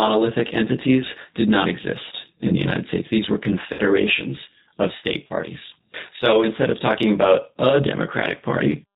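Channel delay (comb filtering) runs throughout: one channel lags by roughly 20 ms before the mono sum, cutting closely spaced notches from near 20 Hz upward, so the speech sounds rough or slightly doubled. The G.729 codec damage is also present throughout and plainly audible. Nothing above 4 kHz survives, and the voice has a rough, synthetic edge that fits an 8 kbit/s G.729A coder. At 3.73 to 3.83 s, VoIP packet loss concealed by the speech codec covers about 60 ms of missing audio, consistent with two lost packets. The decoder stretches the last sound into a fading buzzy tone or coloured noise, and the voice stays weak briefly afterward. At 5.27 to 5.33 s, just after "of state", a second VoIP packet loss concealed by the speech codec bridges about 30 ms with a short, decaying smear.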